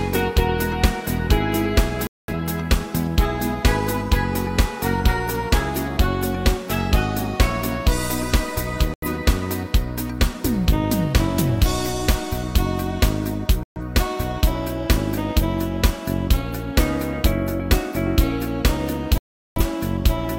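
Digital broadcast dropouts occur at 2.07 to 2.34 s, 8.94 to 9.07 s, 13.63 to 13.80 s and 19.18 to 19.61 s. Each time, the receiver stopped getting usable frames and muted, so the sound cuts to silence and resumes further along. The gaps last about 0.21, 0.09, 0.13 and 0.38 s, all multiples of roughly 43 ms, which fits whole codec frames being discarded. The audio sent during those holes is lost, not delayed.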